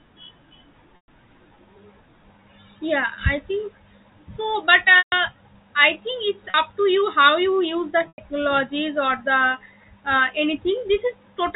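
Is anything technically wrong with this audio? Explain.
Yes. The speech has four gaps from packet loss with pitch repetition, at 0.96–1.08 s (120 ms), 4.98–5.12 s (140 ms), 6.50–6.54 s (40 ms) and 8.08–8.18 s (100 ms). Packets went missing in transit, which fits 20 ms packets, and the receiver filled each hole by looping the last pitch cycle and fading it away. The 40 ms gap sounds like a brief buzzy hold. The longer three smear into a droning tail that sinks toward silence before speech cross-fades back in, all over the 4 kHz-limited telephone band of the G.711 coding.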